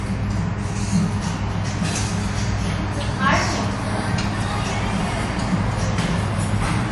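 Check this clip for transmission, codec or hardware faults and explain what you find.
One fault is present throughout: MP3 compression damage, plainly audible. Nothing remains above 11.3 kHz. The encoder likely ran short of bits, fitting a low bitrate near 48 kbps, cutting treble and dropping weak frequency lines frame to frame. The sound turns watery and swirly, with smeared attacks.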